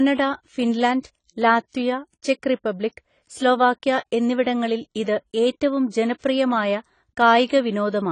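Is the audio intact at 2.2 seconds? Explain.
No. Throughout the clip, including 2.2 seconds, the speech has likely been squeezed through AAC compression at a low bitrate, around 24 kbps. Nothing remains above 10 kHz, and the coarse quantisation leaves the sound dull and smeared, with a warbling, fizzy edge on sibilants.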